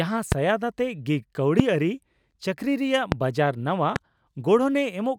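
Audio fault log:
0.32–0.34, 1.60–1.62, 3.12–3.14 and 3.96–3.98 s: loud pop. Each is one sharp pop, about 15 to 20 dB above the speech. The third follows "ᱪᱟᱹᱠᱨᱤ ᱨᱮᱭᱟᱜ". A brief voltage pulse, likely from static or a switch, sits on the signal. The speech continues underneath.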